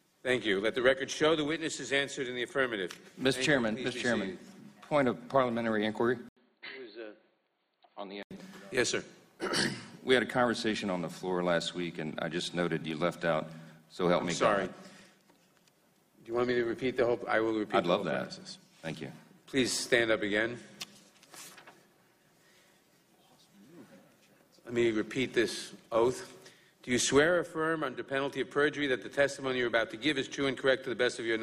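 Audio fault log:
6.29–8.31 s, input switched to a poorer device: after a brief gap of about 80 ms the sound goes dull and boxy, with nothing above 4.5 kHz, drops roughly 10 dB in level, and picks up a faint new noise floor sitting well under the signal. That's likely the system hopping to a different mic or a headset call profile, whose narrower band, own gain and own hiss replace the original input until it switches back at 8.31 s.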